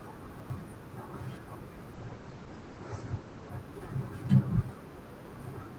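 At 0.3 to 0.5 s, chunks out of order: two 100 ms pieces swap places, so the later one plays first. Unlike a dropout or glitch, nothing goes missing. The sound jumps backward at the hard joins, a brief jumbled stutter.

From 1.94 to 3.57 s comes a call bitrate drop. The encoder is starved of bits for about 1.6 s, which fits a fall from roughly 48 to 12 kbps. The top end narrows from 20 kHz to 8 kHz, leaving the speech muffled and watery. Unlike a simple low-pass filter, it also sounds coarse and smeared, then recovers.

At 5.1 to 5.3 s the same chunks out of order fault returns, with one 100 ms piece arriving a chunk late. It gives the same backward-jumping jumble, with no gap.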